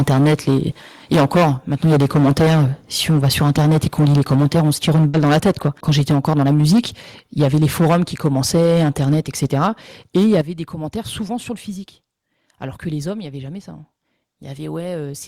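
Harsh, crackling edges on the loudest syllables run through 0.0–0.59 s, 1.12–2.66 s and 3.09–6.86 s, likely microphone overload, with peaks pushed about 11 to 14 dB past the converter's limit and a good share of samples flattened. At 3.11 s the level drops suddenly by about 2 dB, likely the microphone volume stepped down by the call software after those clipped peaks.

At 5.08–5.14 s a burst of packet loss turns into a short held, fading sound. The receiver stretched the last audio for 50 ms before jumping ahead past a 50 ms gap.

At 6.12 s another sudden drop, about 3 dB, comes from the microphone volume stepped down again. The crackling overload returns at 7.39–7.97 s and 8.24–9.68 s, about 9 and 6 dB over, and at 10.15–10.41 s, just before "des commentaires". At 10.41 s the level falls abruptly by about 10 dB as the input volume is stepped down once more.

Between "des commentaires" and "sur le physique", at 11.27–11.30 s, a brief smear marks short concealed packet loss, where roughly 10 ms of missing audio was filled from the preceding sound.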